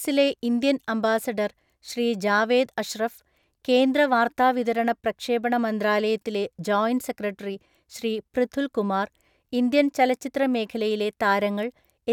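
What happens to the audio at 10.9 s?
At 10.9 s the speech continues intact, with no dropout, click, distortion or other fault at that point.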